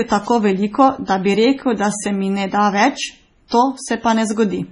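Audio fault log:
Throughout: MP3 compression. The sound is watery and swirly, with a metallic chirp on s sounds, smeared attacks, and nothing above 10.6 kHz. The likely cause is heavy MP3 encoding at a very low bitrate, around 24 kbps judging by the damage. With so few bits, the encoder cuts off the treble at a fixed point. Weak frequency lines are dropped and flicker in and out from frame to frame, which makes the swirl.
3.48 to 3.52 s: pre-echo. Just after "mi ne da več", a short wash of hiss creeps in about 38 ms before a sharp onset, and the attack sounds softened and blurred. The transform codec spreads its quantisation noise evenly across a whole block. Because this attack lands late in its block, noise sized for the loud part also fills the quiet moment just before it.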